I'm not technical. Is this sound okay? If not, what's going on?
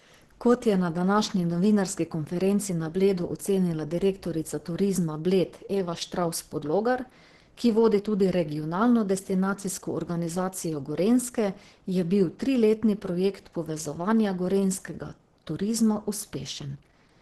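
No, not quite. The whole recording sounds squeezed, likely by heavy Opus compression, a way of shrinking audio files that throws detail away. Here it's been pushed so hard that the encoder drops into its speech-oriented mode, so the voice comes out muffled and hoarse. Nothing above about 12 kHz survives, which takes the crisp airiness off the top. It's the same from start to finish, not one bad spot.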